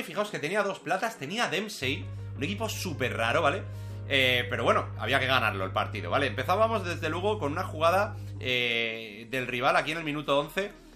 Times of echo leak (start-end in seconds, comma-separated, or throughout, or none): none